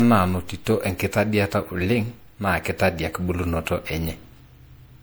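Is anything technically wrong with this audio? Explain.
Yes, there's generation loss running through the whole speech clip: it sounds swirly, smeared and hollow, with blurred attacks, likely from being re-encoded with MP3 around five times, fitting roughly 96 kbit/s. Each pass re-quantises on a shifted frame grid, so noise and spectral holes pile up.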